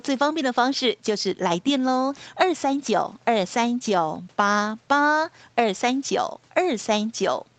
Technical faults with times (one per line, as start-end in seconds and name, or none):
none